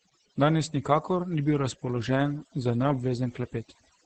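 From start to finish, overdone noise removal affects the speech. The noise reduction was set too strong. It pulls individual frequency bands down whenever they sit near the noise level. Quiet parts of the voice vanish with them. Gaps fall to near silence with twinkling specks.

Opus voice compression runs throughout as well, in its SILK speech mode. Nothing sounds above about 8.7 kHz, pointing to a wideband setting. The heavy damage fits a bitrate around 10 kbps. The excitation is coded coarsely, so the voice turns muffled, hoarse and slightly robotic.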